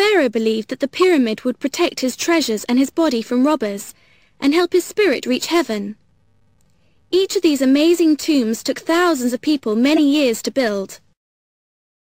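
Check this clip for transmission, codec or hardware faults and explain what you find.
One real problem shows up. At 9.96 to 9.99 s there's a corrupt frame decoded: a few damaged compressed frames were played anyway, misplacing energy into a loud chirpy burst peaking around -5 dBFS.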